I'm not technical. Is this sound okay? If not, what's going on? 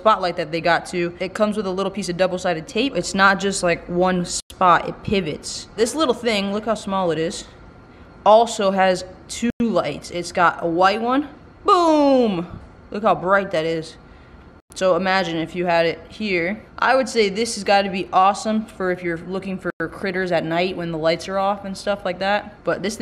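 No. The sound stops for a tenth of a second at 4.40, 9.50, 14.60 and 19.70 s. This is a gap between chunks: the audio comes in five-second pieces, with silence left at each join.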